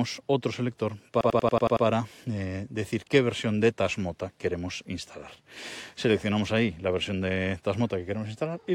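From 1.21 to 1.86 s, a system hang loop replays one 93 ms slice seven times. The result is a 10.8 Hz machine-gun stutter, which fits a stalled driver cycling a 4096-sample buffer. Unlike dropout stutter, every repeat is identical. Speech resumes at "eh decir" with virtually nothing lost.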